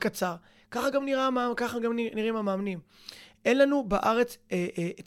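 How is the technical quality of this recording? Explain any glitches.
Nothing in the recording stood out as a technical problem on listening, so there are no glitches to explain.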